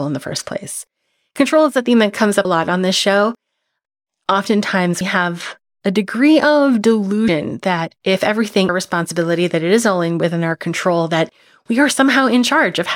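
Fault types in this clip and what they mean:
Compressed frames skipped: whole 32 ms frames vanish, so speech jumps ahead about 100 ms, once about 300 ms.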